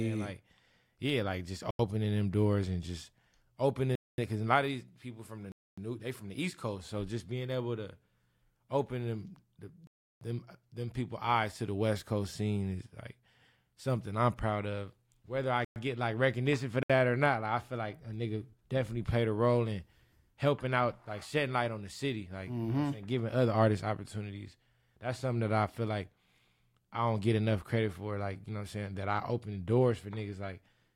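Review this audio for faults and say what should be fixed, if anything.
Blocks of digital silence: the output buffer was apparently not filled in time and was zeroed. The speech drops straight to nothing at 1.71–1.79, 3.95–4.18, 5.52–5.78, 9.87–10.21, 15.65–15.76 and 16.83–16.90 s. These holes run from 67 to 341 ms, and the 85 ms and 341 ms gaps fit whole blocks of 4096 and 16384 samples at 48 kHz. To prevent it, use larger buffers and give the audio thread real-time priority so each buffer is filled before it is due.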